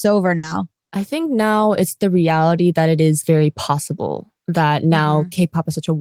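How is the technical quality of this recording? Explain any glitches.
The recording has one glitch, a burst of packet loss from 0.37 to 0.46 s, just before "I think now it's". Several packets went missing, so the receiver extended the last sound for about 60 ms while fading it. The speech then resumes with about 60 ms skipped.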